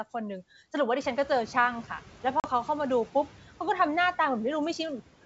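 Speech over a wideband telephone path, where G.722 coding leaves at most a faint upper-band hiss. At 1.0 s the room noise jumps by about 15 dB, and a noise suppressor catching up is audible from 1.0 to 1.65 s. The noise comes through with less reduction at first, then sinks by about 5 dB as the suppressor's noise estimate adapts over roughly 650 ms. At 2.40 s, packet loss on an ADPCM call cuts a hard-edged 40 ms hole, and the disturbance ends by 2.47 s, which fits a couple of packets lost. Speech resumes slightly distorted, because the decoder's adaptive predictor and step size have drifted from the sender's. It settles within a few tens of milliseconds.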